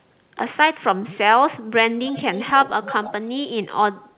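A speech clip sent over a narrowband call path, with nothing above 4 kHz, which fits G.711 mu-law at 64 kbps. Two bursts of echo leak can be heard. The first runs from 2.04 to 2.69 s. The second runs from 2.87 to 3.13 s. Each is a faint copy of the voice trailing 288 ms behind. The first sits about 20 dB below the speech. The second is stronger, about 15 dB down. The likely cause is a far-end loudspeaker whose echo canceller let part of its microphone pickup travel back down the line.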